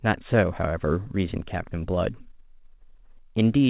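No faults are audible in this speech, and the content stopping at 4 kHz is consistent with a narrowband call path such as G.711 mu-law.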